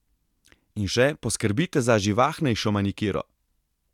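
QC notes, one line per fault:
Nothing to flag here, the speech comes across without any technical trouble worth noting.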